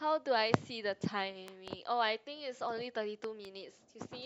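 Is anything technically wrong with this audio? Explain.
Yes. Two loud pops occur, each a double pop, at 1.48 to 1.70 s and 3.24 to 3.47 s. Each is roughly 10 dB above the speech, likely a voltage step from a switch or static.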